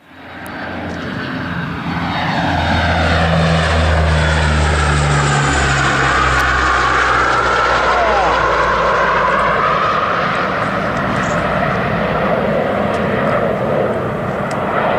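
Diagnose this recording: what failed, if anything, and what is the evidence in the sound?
Arcing from a nearby switch, motor or static discharge was likely coupled into the analogue wiring, producing electrical switching spikes. Two sharp snaps sit on top of the sound, at 0.47 s peaking around -10 dBFS and at 6.40 s, a tight cluster of clicks reaching about -5 dBFS.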